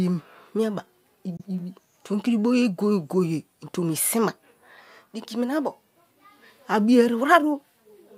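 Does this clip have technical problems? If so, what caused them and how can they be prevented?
Yes. A Bluetooth dropout occurs from 1.37 to 1.41 s: the speech cuts to silence with abrupt edges or a fade of a few milliseconds, then picks up again further along, as though it kept playing through the gap. About 23 ms of audio is missing, which fits a single lost frame. The likely cause is a packet that reached the headphones too late and was discarded. Keeping the headphones close to the source with nothing blocking the path, and away from crowded 2.4 GHz interference, helps prevent this.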